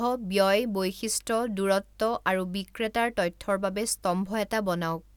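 No technical faults can be heard at any point in the speech.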